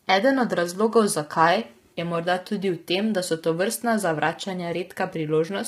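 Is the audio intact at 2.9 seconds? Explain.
No. At 2.9 seconds the speech carries the low-delay AAC compression damage that runs through the whole clip, and the damage is heavy. The likely cause is AAC-ELD coding, and the grain points to a low bitrate of around 24 kbps. Its short frames smear the pitch harmonics, so the voice sounds rough and grainy. On a spectrogram the harmonic lines look blurred, with noise filling the gaps between them, and the top band looks thinned or patchy.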